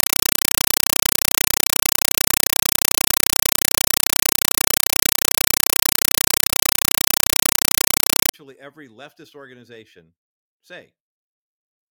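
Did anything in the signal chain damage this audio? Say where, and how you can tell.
Yes. From 0.0 to 8.34 s the speech is replaced by very loud chattering static, a compressed stream played as audio at the digital link or playback stage. Bursts of noise about 5.3 ms long repeat 31.25 times a second with silence between them, which fits an undecoded AC-3 stream passed as PCM. That fixed burst cadence distinguishes it from random digital noise or clipping.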